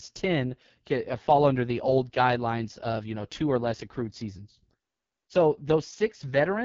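Throughout the clip the speech sounds rough and raspy, with nothing at all above about 7.3 kHz. This is the AMR wideband (HD Voice) codec at heavy damage, a level that fits its lowest mode of around 6.6 kbit/s. At that rate the pulse-based vocal tract model is starved of bits, so the excitation turns coarse, and the band above 6.4 kHz is only shaped noise.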